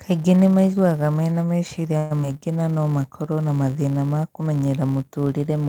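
A steady buzz at 172 Hz runs under the speech from start to finish, rising and falling with its loudness. This is a filter restarted on every block: it starts each block from silence, so each block opens with a small click. The 172 Hz rate fits 256-sample blocks.

From 1.97 to 2.12 s, just after "nĩ maiguaga mena", the sound is held as a fading buzz or hiss before the speech resumes where it stopped. This is a call audio freeze, likely from delayed packets draining the jitter buffer. It inserts about 131 ms of filler with nothing lost.

From 2.22 to 2.35 s, just before "na no makorwo na", there is a brief smear. This is short concealed packet loss: 40 ms never reached the decoder, and the receiver extended the preceding sound to bridge the hole, adding roughly 30 ms.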